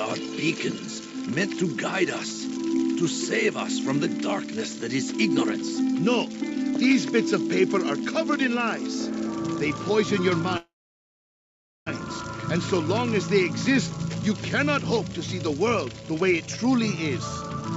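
A call audio freeze hits from 10.57 to 11.88 s: a brief fading continuation of the last sound, then about 1.2 s of silence before the audio resumes where it left off. Nothing is lost, it just arrives 1.3 s late, likely because packets stalled in transit and the jitter buffer ran dry. From 15.13 to 17.63 s there's a jitter buffer speed-up, with the receiver snipping out pitch-period slices to cut the excess buffered delay. The audio plays at about 107% speed with unchanged pitch and sounds a bit rushed, shedding roughly a fifth of a second overall. All of it sits within the call path's 8 kHz bandwidth.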